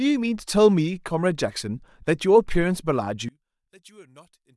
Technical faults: one channel inverted

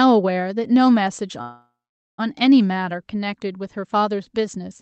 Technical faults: call audio freeze

